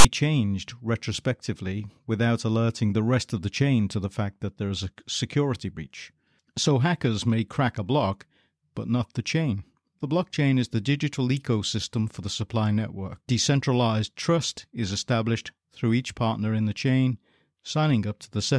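At the very start, from 0.00 to 0.05 s, the speech is preceded by file tags played as audio: a block of text metadata at the head of the file has been decoded as though it were sample data. The character bytes form a loud, rasping burst pushed hard to one side of zero, with abrupt edges, before "changed retrospectively without alerting" begins. Unlike a dropout or codec glitch, it is harsh, lopsided garbage rather than silence or smeared sound.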